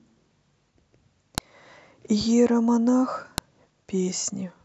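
A sharp, loud click snaps through the speech at 1.38 s and again at 3.38 s, each lasting only a couple of milliseconds and landing regardless of what the speech is doing at that moment. This is a file header played as audio: the stream appears to be built from 2-second WAV pieces joined without stripping their headers, so the header bytes at the start of each new piece are reproduced as sample values.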